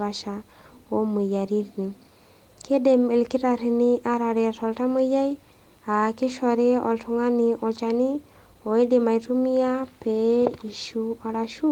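The speech carries no technical faults, and its full-band content reaching to about 20.2 kHz, with only light coding texture, fits Opus voice compression running in hybrid mode at around 24 kbps.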